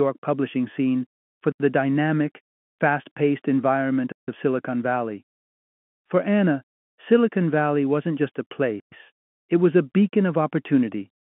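Blocks of digital silence land at 1.52 s (80 ms, after "publishing scene for"), 4.12 s (160 ms) and 8.80 s (120 ms, before "it was a beacon"). Each is likely an unfilled output buffer. The sound cuts out and back with no fade. On the waveform these appear as dead-flat lines. On the spectrogram they are blank vertical gaps, cutting through the 150 Hz to 3.4 kHz telephone band.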